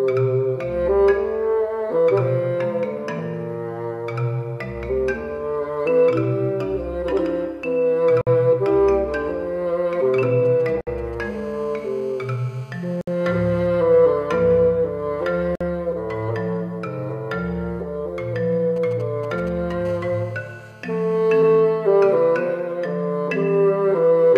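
At 8.21 s the sound drops out for about 56 ms and then resumes exactly where it stopped. This is a gap at a join of encoded pieces. Two separately encoded segments were joined without trimming, so the encoder's start-up delay and last-frame padding remain as a silence. The same break recurs at 10.81 s (60 ms), 13.01 s (62 ms) and 15.55 s (52 ms). The edges are smeared by the codec. Nothing is lost or repeated, which is what separates these gaps from dropouts that skip material.

From 10.45 to 11.24 s, and again from 18.76 to 19.72 s, GSM signalling bursts sound as a galloping dit-dit-dit of short 217 Hz buzzes. They sit roughly 20 to 25 dB below the sound. A nearby 2G phone is exchanging brief groups of radio bursts with the network, and the audio circuitry rectifies them. Their broken, clustered rhythm distinguishes them from the steady call buzz that follows.

Immediately after the first burst group, from 11.25 to 13.67 s, a continuous GSM phone buzz appears at about -24 dB. 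It is a hard, raspy tone at 217 Hz with dense harmonics. It returns from 19.85 to 21.60 s at about -26 dB. The phone is now transmitting continuously in a call, pulsing its radio 217 times a second. That fixed rate and gritty harmonic spectrum separate it from 50 or 60 Hz mains hum.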